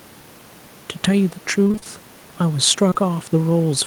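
From 1.63 to 1.87 s, the speech breaks up with repeated packet loss, giving a robotic sound. Six gaps fall in this quarter second, the longest 25 ms. The receiver patches each by extending the last sound, so about half the stretch is filled in. It turns choppy.

Then comes short concealed packet loss, twice in a row: at 2.89 to 2.93 s and at 2.93 to 2.97 s. Each hole is about 20 ms. The decoder continues the previous sound and blends back into the real audio. It is heard as a brief smear; the faint room noise sits about 27 dB below the speech.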